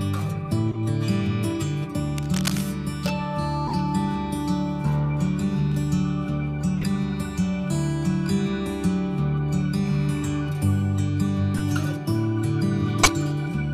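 A decoder played damaged compressed frames instead of concealing them. Misread gains and codes spray energy into the wrong frequencies, so each corrupt frame decoded comes through as a short chirp or noisy blip: at 0.71–0.78 s, 3.67–3.76 s, 6.78–6.86 s and 11.57–11.60 s, and a much louder burst at 13.02–13.12 s.

From 2.17 to 2.64 s, a dense, uneven rustling sits over the audio at a lower level than the audio itself. This cable scratch noise likely comes from a worn cable or connector shifting and rapidly changing its contact resistance.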